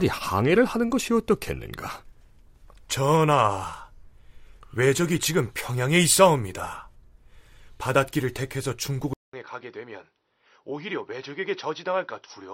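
Input switched to a poorer device at 9.13 s: after a 200 ms gap, the speech turns duller and roughly 10 dB quieter, with nothing above 5.9 kHz, likely from a narrower-band microphone taking over.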